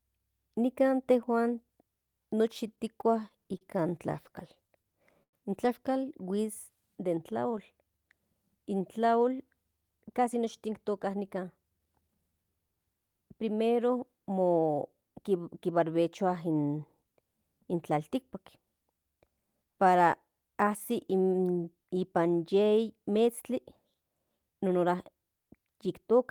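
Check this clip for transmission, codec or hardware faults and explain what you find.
The speech shows packet-delivery and jitter-buffer faults: two stretches of stutter, a brief freeze, then a slow-down followed by a speed-up.

Repeated stalls (stutter), 2.75–3.63 s and 4.13–4.93 s: late packets emptied the buffer five times in each stretch, and the receiver bridged gaps of up to 38 ms, so the speech catches and drags.

Call audio freeze, 5.23–5.35 s: the buffer likely ran dry on held-up packets, and about 90 ms of near-silence is inserted before the speech resumes where it stopped.

Jitter buffer slow-down, 6.42–8.10 s: the receiver repeated pitch periods to rebuild its reserve, adding 142 ms and running at 92% speed with unchanged pitch.

Jitter buffer speed-up, 9.91–12.45 s: the receiver cut out short pitch periods to shed excess delay, removing roughly 0.3 s and leaving the speech hurried at 110% speed.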